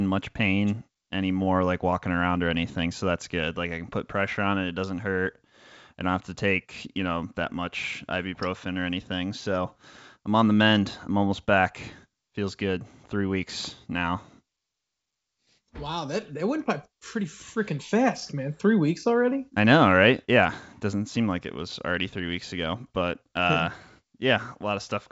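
No technical faults can be heard in the speech, which arrives over a G.722 wideband telephone path at 64 kbit/s, with content extending up to 7.7 kHz and any coding hiss in the upper band faint at most.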